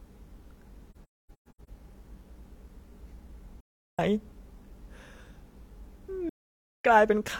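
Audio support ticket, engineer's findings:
Speech dropouts at 0.91–1.69 s, 3.60–4.00 s, 6.29–6.85 s. AAC frame loss with muting in the decoder. Lost frames zeroed, windows overlap-fade the sound out and back in. Soft-edged holes. First gap scattered across about 0.77 s, with about 0.55 s missing, longest silent run about 300 ms. Second gap is about 0.38 s missing. Third is about 0.55 s missing. Hole sizes fit frames of roughly 43 ms each.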